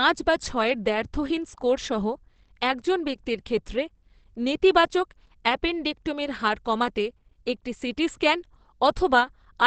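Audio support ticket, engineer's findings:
Speech muffled and hoarse throughout, nothing above 8.6 kHz; likely Opus compression in speech mode at a low rate, around 16 kbps. Roughness with less swirling than MP3.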